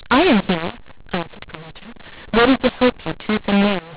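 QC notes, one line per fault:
Throughout, mu-law and A-law mixed up: the speech was encoded with G.711 A-law but decoded as mu-law, so each 8-bit code maps to the wrong level. Loudness steps come out scrambled, giving harsh, gritty distortion, and the quietest samples are pushed up, filling pauses with noise.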